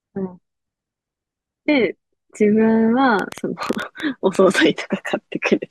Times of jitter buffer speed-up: none

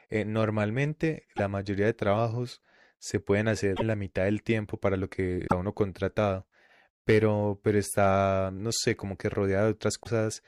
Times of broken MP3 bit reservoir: 1.36-1.40, 3.76-3.82, 5.46-5.52, 10.02-10.07

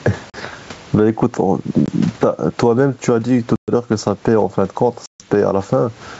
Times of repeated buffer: none

